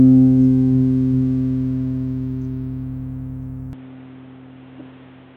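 At 3.73 s, input switched to a poorer device, likely: from there the sound turns dull with nothing above 4.1 kHz, over new noise about 30 dB down.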